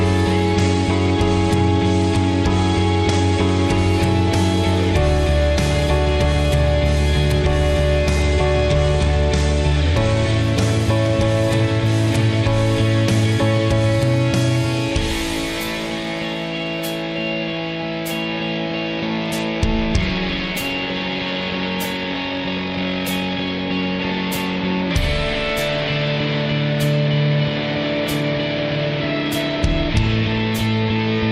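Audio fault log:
0.57–3.66 s, 8.22–10.43 s and 18.53–20.02 s: Bluetooth SBC bit pool drop. The link struggles and the sender cuts its SBC bit pool to keep audio flowing. The sound fits a fall from 28 to 12, roughly 96 kbps. Starved of bits, the highest sub-bands get little or nothing and the remaining bands are quantised coarsely. In each span the treble turns dull and a gritty, grainy noise sits on the sound until the rate returns.
25.06–31.3 s: channel delay (comb filtering). One channel runs late by roughly a single sample, a few hundredths of a millisecond, and the two channels are folded to mono. Content shared by both cancels at regular intervals, but with so short an offset the first notch lands up near 20 kHz, at the top of the audible range. What comes through is a loss of air and sheen, a dulled, slightly veiled top end lasting to the end of the clip.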